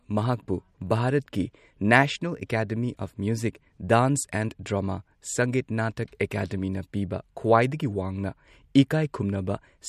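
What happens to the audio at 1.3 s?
At 1.3 s the speech carries MP3 compression artefacts, likely from a low bitrate near 48 kbps. Nothing sounds above 15.3 kHz. Weak detail swirls, and s sounds chirp.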